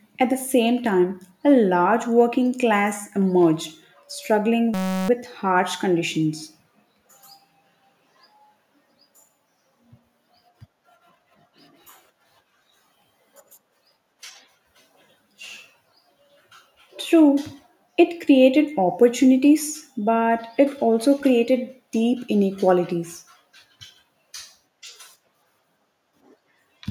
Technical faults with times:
4.74-5.09 system hang loop

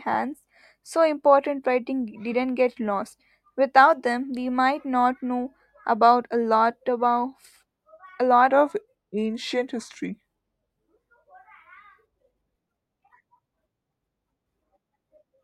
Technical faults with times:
8.50-10.96 section at the wrong speed

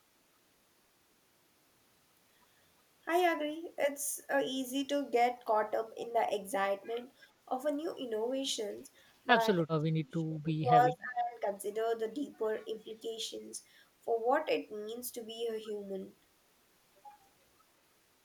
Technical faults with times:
8.98-9.02 echo leak
9.64-11.45 speech suppressed in double talk
10.88-10.93 echo leak

